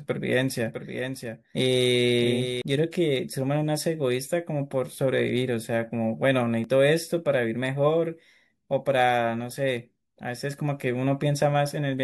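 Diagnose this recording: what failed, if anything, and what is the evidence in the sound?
A doubled audio track runs from 0.66 to 2.62 s: a full-band copy of the speech trails by roughly 0.7 s, about 5 dB quieter, and starts and stops abruptly. It has no decay or room colour, which rules out acoustic echo. The likely cause is a second capture through a slower path.

At 6.64 s there is a tiny skip from an overlap between stream segments, in the network or playback stage. Time stamps of neighbouring 6.0 s segments overlap, so the player trims real audio and the waveform jumps. A dropout would leave silence instead.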